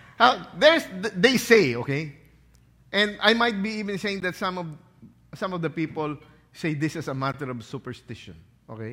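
At 4.20 s, just before "that some of", and 7.32 s, after "say this is a", a block of digital silence cuts in: 16 ms of silence, heard as a very short hole. The waveform shows a flat gap, and the spectrogram a blank vertical strip.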